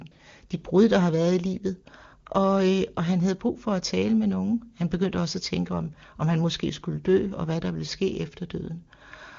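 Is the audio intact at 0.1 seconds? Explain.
No. AMR comfort noise sits right around that moment, from 0.11 to 0.15 s and again from 0.17 to 0.19 s, just before "de brud der har". In those brief pauses the phone stopped sending speech frames, and the receiver filled the 40 ms and 20 ms gaps with synthetic noise built from a rough level-and-spectrum sketch. The result is a smooth, even hiss replacing the real background. Unlike a dropout, it leaves no silent hole or click.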